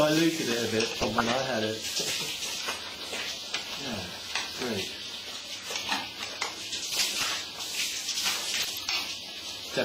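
Right at 0.94 to 1.29 s there's a patch of DAB burbling: weak reception let bit errors slip past the error correction into the MP2 stream, so individual sub-bands pick up short blips of noise and jump in level for up to a frame. It comes back at 6.90 to 7.25 s and more briefly at 8.56 to 8.78 s. The error rate behind it sounds like well under a percent, a little milder each time.

In between, there are repeated buffers at 3.40 to 3.42 s, 5.03 to 5.05 s and 7.39 s. Fresh audio didn't arrive in time, so the player looped the last chunk it had, twice over in the first two and once in the last. Each repeat is so short, which fits a 10 ms buffer, that it lands as a quick buzzy click with hard joins rather than a proper stutter.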